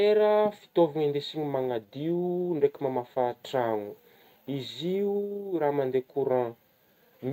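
Nothing goes wrong anywhere in this bit of speech; there are no technical faults to point to at any moment.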